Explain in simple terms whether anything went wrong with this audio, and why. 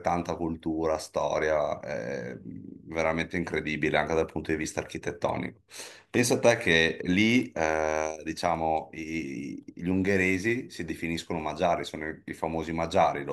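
Nothing went wrong with this audio, so there is no problem to explain.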